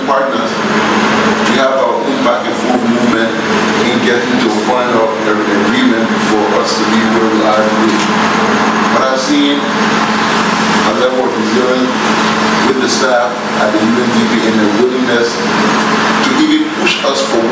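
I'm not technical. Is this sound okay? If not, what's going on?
No. All the way through, the level keeps breathing, so the sound feels squashed and uneven. That is gain pumping, and the likely cause is that the microphone level was set far too high, so an automatic limiter keeps yanking the volume down on every loud moment and letting it back up afterwards, a big swing each time.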